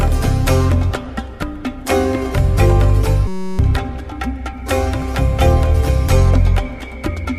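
From 3.28 to 3.59 s the playback system froze in a system hang loop: the driver stopped supplying new audio while the sound hardware kept replaying the same ring buffer. The repeated piece is 5.33 ms long, which fits a 256-sample buffer, so it cycles at 188 Hz and becomes a steady buzz at that pitch, repeating dozens of times. Roughly a third of a second of audio is missing when the sound resumes.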